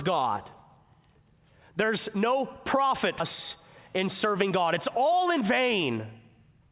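At 3.2 s, right after "no profit", the speech skips ahead: about half a second of audio is gone and the two sides are butted together with no silence or filler. A concealment gap would leave a hole or a smeared tail, but here the jump is seamless.

From 3.56 s to 6.68 s a jitter buffer speed-up runs the speech at about 106% speed. The receiver trims tiny pitch-period slices over and over, about a fifth of a second in total, to shed excess delay. Unlike resampling, the pitch stays put while the pace sounds rushed.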